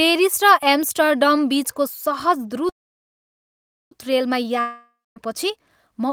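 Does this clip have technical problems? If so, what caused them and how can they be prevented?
Yes. From 2.69 to 3.93 s there is a call audio freeze. The speech stops and the last sound hangs on as a brief fading buzz, then nearly 1.2 s of silence follows before the speech resumes where it left off, with nothing skipped. The likely cause is packets held up in transit, which emptied the jitter buffer, so everything after this point arrives about 1.2 s late. On a spectrogram, the last harmonics smear briefly and then give way to a blank band. An adaptive jitter buffer with enough headroom, on a network path with less congestion, helps prevent this.

From 4.61 to 5.18 s there is a long network dropout. The sound continues as a fading hiss for a few tenths of a second, drops to silence for about 0.23 s, and then returns with roughly 0.56 s of speech simply gone. The likely cause is a stretch where no packets got through at all. 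In the waveform, the envelope tapers to a flat line and then jumps straight back. A more stable connection, preferably wired, or forward error correction helps prevent this.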